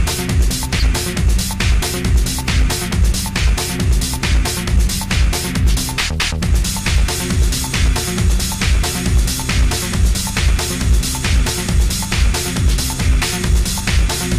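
From 0.75 to 0.83 s, a corrupt frame decoded: flipped bits scatter energy across wrong frequencies, making a chirp, squeak, blip or burst of noise, a bright vertical smear and a waveform spike peaking around -5 dBFS.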